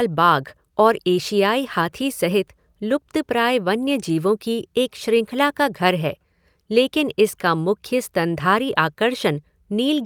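A speech recording with no audible technical fault anywhere in the signal.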